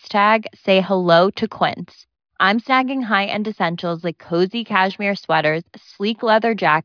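Nothing in this speech recording's signal points to a technical fault at any point.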